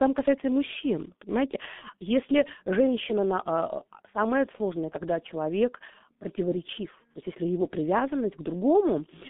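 From the first moment to the end, the speech sounds muffled and hoarse, with consonants smeared together and no brightness above about 3.6 kHz or weight below 200 Hz. This is heavy G.723.1 codec damage: the coder works in 30 ms frames at a rate that fits roughly 6 kbit/s, modelling the voice coarsely and updating that model slowly, so fast consonant detail is lost and a rough, buzzy texture replaces it.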